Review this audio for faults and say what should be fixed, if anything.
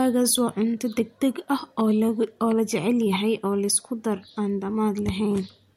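No faults heard; nothing here needs fixing.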